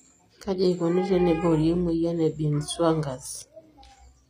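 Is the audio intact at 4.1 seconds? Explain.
No, not really. At 4.1 seconds you're hearing the same damage that runs through the whole clip, and it sounds like HE-AAC compression, likely at a very low rate, around 24 kbps. The top end is rebuilt by copying lower bands upward rather than coded directly, so the s sounds come out gritty and metallic, with nothing at all above about 15.5 kHz.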